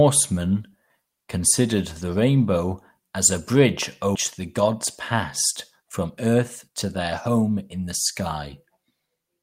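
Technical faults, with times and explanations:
4.15 s, skip ahead: right after "rainbow as a bridge" the speech jumps forward with no gap filled, losing roughly 0.4 s. Audio already waiting was discarded, likely from a jitter buffer overflow, so both sides of the cut join almost directly.
6.07–6.86 s and 7.28–7.88 s, jitter buffer speed-up: the speech runs at 108% and then 112% speed at unchanged pitch, sounding hurried. The receiver trimmed many short pitch-period pieces to shrink excess buffered delay, removing around 70 ms in each stretch.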